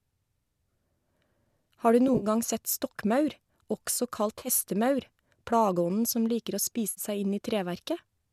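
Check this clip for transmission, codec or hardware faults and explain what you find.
AAC frame loss with concealment occurs three times, at 2.08–2.26 s, 4.38–4.48 s and 6.90–7.01 s. Roughly 60–70 ms of audio goes missing each time, in runs up to about 50 ms, which fits the roughly 10 ms frames of what is likely a low-delay AAC stream. The decoder patches each gap from the last good spectrum, so the speech briefly smears into a noisy, phasey blur.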